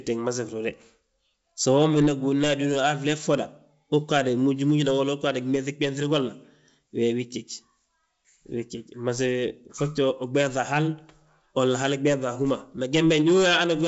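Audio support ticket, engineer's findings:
Findings: no fault found in the speech, which is carried over G.722 wideband coding at 64 kbit/s with at most faint coding traces.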